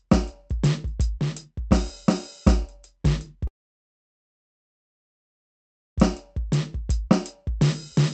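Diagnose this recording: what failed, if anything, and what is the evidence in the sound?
Network stage: the music cuts out at 3.47 s and resumes at 5.99 s with about 2.5 s lost, likely a long network dropout. Concealment smears a brief fading buzz, then near-silence, showing as a flat waveform and a blank spectrogram band beside the Opus path's 8 kHz ceiling.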